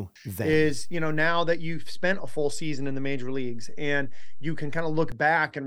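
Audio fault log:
0.53 to 5.12 s, DC step: a low thump at 0.53 s and another at 5.12 s, with the speech carrying on unchanged between them. The waveform's zero line jumps by about -25 dBFS, holds, then steps back, and each abrupt shift sounds as a thump.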